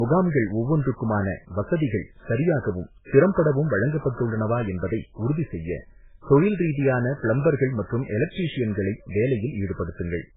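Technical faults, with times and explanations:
Throughout, transcoding between lossy codecs. Nothing is heard above 3.8 kHz, so the speech sounds dull. Coarse, warbling artefacts sit beneath a second coding layer. The sound points to a likely 8 kbit/s MP3 re-encoded as 32 kbit/s AAC-LC, which kept the earlier damage.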